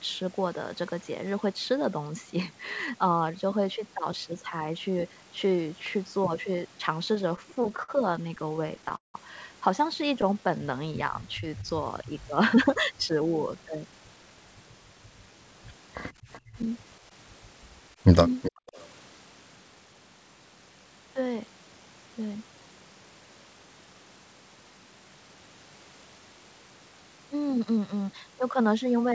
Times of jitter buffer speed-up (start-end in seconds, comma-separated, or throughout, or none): 12.54-14.38, 27.33-27.94